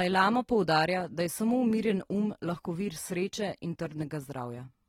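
From start to finish the speech carries plainly audible AAC compression damage, likely from AAC-LC at a low rate, something like 32 kbps. Quantisation leaves the sound dull and smeared, with a warbly, fizzy edge on sustained sounds and sibilants, and nothing above 19.4 kHz.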